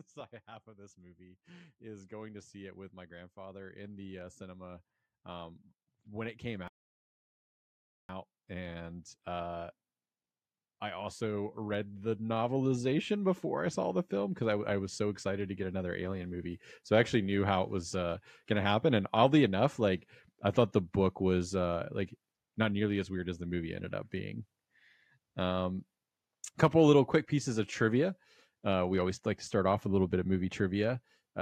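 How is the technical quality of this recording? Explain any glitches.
The recording has two faults: a long automatic gain rise through the first half and a playback stall inside that rise.

Automatic gain rising runs from 0.45 s to 16.37 s. The gain control judged the input too quiet and kept increasing its gain, by about 22 dB over roughly sixteen seconds. The voice and the background noise floor swell together, so the level climbs steadily while the room noise becomes more prominent along with the speech.

A playback stall occurs from 6.68 s to 8.09 s, cutting the speech off mid-flow for about 1.41 s of complete silence before it resumes. The likely cause is the player running out of buffered data or its audio thread being blocked, leaving nothing to output until it recovered.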